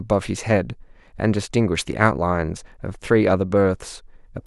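Speech, with nothing technically wrong with it.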